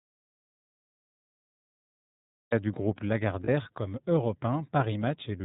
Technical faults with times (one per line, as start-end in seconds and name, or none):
0.00-5.45 iLBC codec
0.00-2.52 audio dropout to silence
3.44-3.49 lost iLBC frames